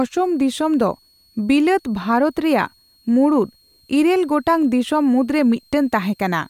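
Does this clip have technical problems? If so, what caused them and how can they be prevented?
Yes: a switching supply whistle sits faintly under the speech throughout, a thin tone wandering between 4.19 and 4.37 kHz, roughly 40 dB down, from a power supply's audible burst-mode oscillation. Power the recording chain from a clean linear supply or battery.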